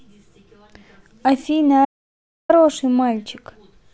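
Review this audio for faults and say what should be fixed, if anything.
There's an audio dropout to silence from 1.85 to 2.49 s: the speech cuts out mid-flow and about 0.64 s goes to silence, no room tone at all. It's likely a lost input or stray mute while recording carried on. Lock down cables and mutes, and monitor input live.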